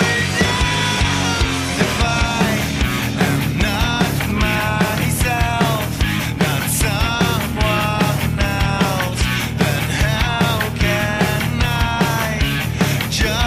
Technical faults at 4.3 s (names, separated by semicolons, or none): GSM signalling bursts